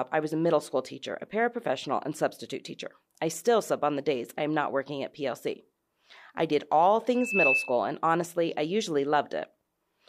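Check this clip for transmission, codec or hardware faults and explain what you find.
One hardware fault stands out in the speech, a loudspeaker feedback squeal from 7.13 to 7.77 s, after "I did all" and before "and honestly I usually". A single 2.6 kHz tone swells over about a third of a second to roughly 5 dB above the speech. The microphone was picking up its own loudspeaker, and the loop gain exceeded one at that frequency. Unlike a steady interference whistle, it grows by itself from nothing.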